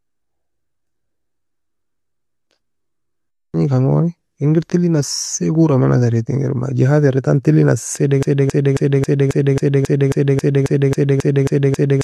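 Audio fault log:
8.23–12.04 s broken-record loop: playback likely stalled and kept resending its last buffered fragment. After "era entan talei nassie", a 0.27 s piece repeats exactly, back to back, 14 times until the end, replacing the speech that should have followed.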